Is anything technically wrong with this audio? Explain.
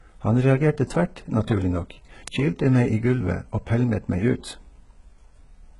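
Yes. Throughout, the speech's treble sounds gritty and metallic, with heavy codec damage and nothing above 11.1 kHz. This is likely HE-AAC compression rebuilding upper bands from copied lower ones, pointing to a very low bitrate near 12 kbps.

At 2.28 s there is one sharp, broadband tick: a bit error spike, where a single flipped bit made one sample jump by a power of two.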